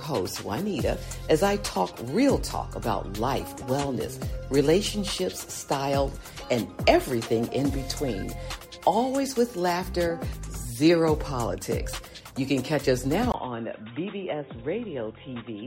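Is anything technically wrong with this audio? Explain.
Yes. At 13.32 s the sound abruptly turns dull and boxy and stays that way to the end at 15.66 s, likely because the input switched to a poorer device. After a gap of about 20 ms, nothing above 3.8 kHz survives, the level drops by around 5 dB, and a new background noise sits well below the signal. A simple low-pass filter would only remove the top end, but here the tone, the level and the noise floor all change together.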